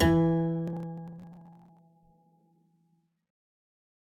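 From 0.68 s to 1.79 s the music breaks into processor overload crackle. The processor falls behind on its very short audio buffers, each apparently under a millisecond, and around fifty of them are skipped outright. Every skip is a hard splice that clicks, so the passage sounds gritty and torn until the load eases. On a waveform the span shows abrupt discontinuities; a spectrogram shows scattered thin vertical broadband streaks across it.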